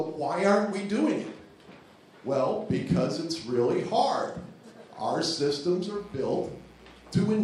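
From 5.95 s to the end at 7.43 s, a mains buzz sits roughly 30 dB below the sound. Switching spikes twice per 60 Hz cycle spray harmonics up into the kHz range, so it rasps, unlike a smooth, low mains hum.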